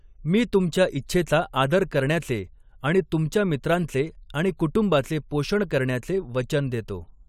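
Nothing here trips any alarm: no technical faults turn up anywhere in this speech recording.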